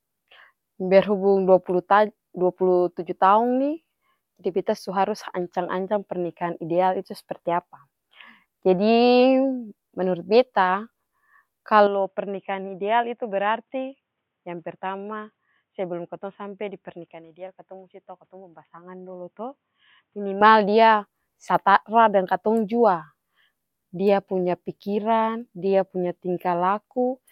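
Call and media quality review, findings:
11.87–20.41 s: sound turns dull and boxy, a few dB quieter, with no gap at either edge. Spectrogram shows a hard ceiling at 3.8 kHz and a faint new noise floor. Likely input switched to a poorer device, such as a headset call profile.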